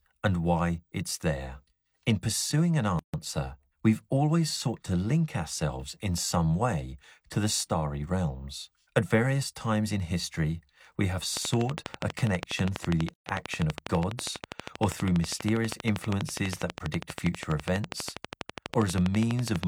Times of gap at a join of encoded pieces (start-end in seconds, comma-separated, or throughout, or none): 2.99-3.14, 13.14-13.26